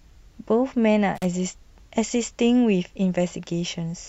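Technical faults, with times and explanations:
1.15 to 1.25 s, intermittent contact: The speech drops out for about 40 ms as a loose cable or plug briefly opens. Crackle marks both edges, where the contact breaks and remakes. Faint hiss remains during the gap.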